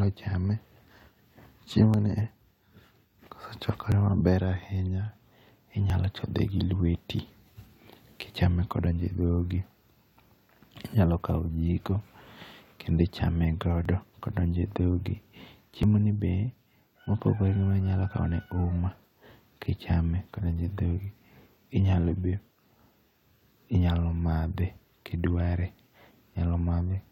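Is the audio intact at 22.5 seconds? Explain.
Yes, the speech at 22.5 seconds is intact, with nothing at that moment that departs from the surrounding sound.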